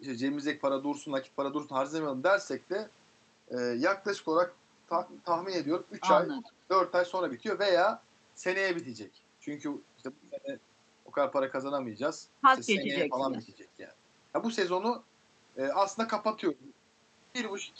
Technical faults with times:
6.36-6.51 echo leak
12.73-13.16 speech suppressed in double talk

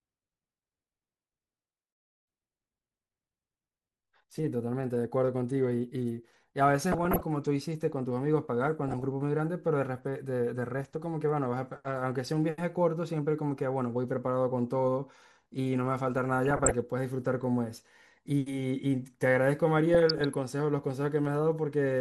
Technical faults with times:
0.00-22.01 MP2 compression
6.92-7.23 DAB burbling
8.88-9.04 DAB burbling
16.48-16.71 DAB burbling
19.94-20.34 DAB burbling

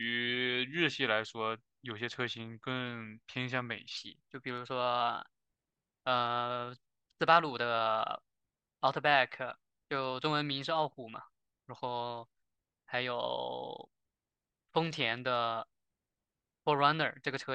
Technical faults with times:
3.97-17.55 section at the wrong speed

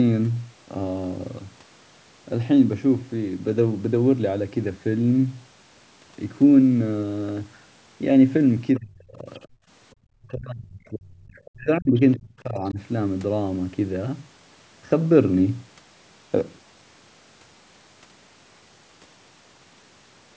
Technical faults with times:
8.76-8.80 other side's voice leaking through
8.79-9.27 speech suppressed in double talk
9.34-9.39 other side's voice leaking through
9.55-9.65 background gated by the echo canceller
9.93-12.79 speech suppressed in double talk
11.36-11.51 other side's voice leaking through
11.98-12.17 other side's voice leaking through

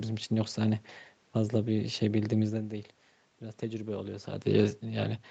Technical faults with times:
2.53-4.55 automatic gain rising

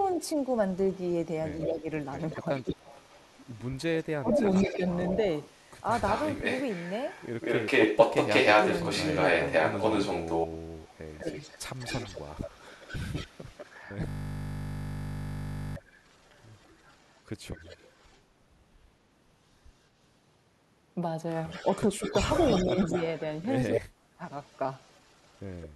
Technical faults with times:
0.08-18.20 echo leak
1.66-2.93 speech suppressed in double talk
3.92-4.83 speech suppressed in double talk
11.22-11.33 speech suppressed in double talk
14.09-15.76 system hang loop
21.50-25.69 echo leak
21.63-24.22 speech suppressed in double talk

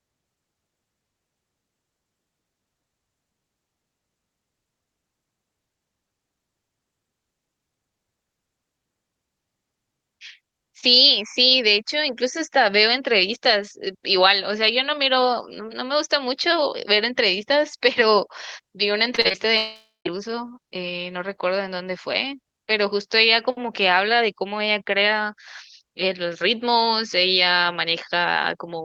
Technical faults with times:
19.15-19.35 repeated packet loss (robotic sound)
19.57-20.07 long network dropout

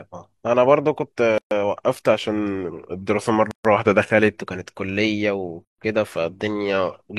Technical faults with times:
1.38-1.51 gap at a join of encoded pieces
2.24-4.39 drift correction step
3.51-3.65 gap at a join of encoded pieces
5.65-5.78 gap at a join of encoded pieces

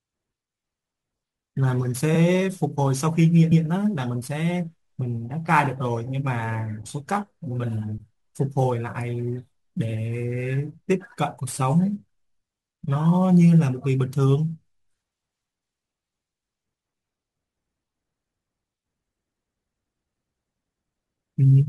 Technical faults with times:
0.00-21.68 sample clock jitter
2.14-2.18 repeated frames
3.51-3.65 repeated frames

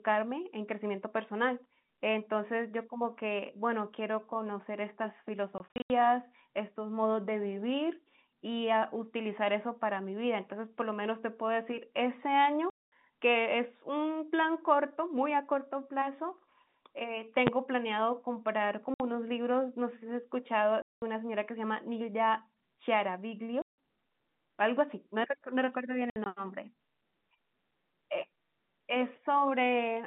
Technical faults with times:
5.58-5.90 packet loss filled with silence
12.70-12.92 packet loss filled with silence
17.47 invalid numbers at full scale
18.94-19.00 packet loss filled with silence
20.82-21.02 packet loss filled with silence
23.62-23.76 packet loss filled with silence
26.10-26.26 packet loss filled with silence

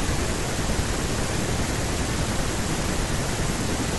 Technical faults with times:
none

